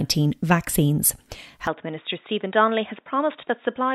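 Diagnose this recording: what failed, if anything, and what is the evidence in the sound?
At 1.67 s the speech abruptly turns dull and boxy and stays that way to the end. Nothing reaches above 3.8 kHz, the level drops a little, and a faint new background noise sits well under the speech. There is no gap at the changeover. This points to the input switched to a poorer device at the driver or device-routing stage, likely a fallback to a narrower-band microphone or a headset's call profile, with its own band limit, gain and noise floor.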